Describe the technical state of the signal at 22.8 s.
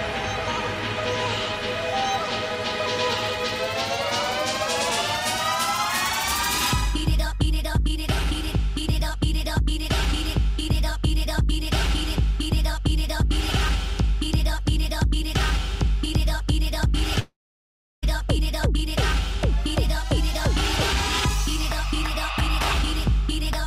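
At 22.8 s the signal is intact, with no dropout, distortion, glitch or other fault to be heard.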